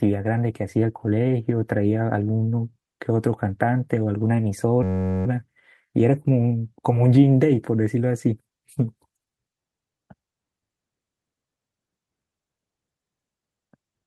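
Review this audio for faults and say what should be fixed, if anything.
Clock drift between sender and receiver runs through the whole clip, with the sending clock roughly 2 percent slow. The receiver's buffer keeps draining, so the speech develops small, irregularly spaced hiccups. On a waveform these appear as tiny seams scattered unevenly along the track. Locking both ends to a common clock, or resampling the incoming stream to match the receiver's rate, would prevent it.

Repeated timing corrections run from 0.06 s to 14.06 s, with the speech playing at 98 percent speed. Each correction repeats a short slice to cover the slower sender. A spectrogram shows small discontinuities in harmonics and formant tracks, all pointing the same way. Smooth adaptive resampling in place of cut-and-repeat edits would prevent these corrections.

A system hang loop runs from 4.83 s to 5.26 s. A 10.67 ms piece of audio repeats exactly 40 times while the computer stalls, which fits a 512-sample buffer. 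This produces a steady 93.8 Hz buzz. On a spectrogram it appears as evenly spaced horizontal lines, and the waveform shows an identical repeating cell. Raising the audio thread's priority and having the driver mute output on a stall would prevent it.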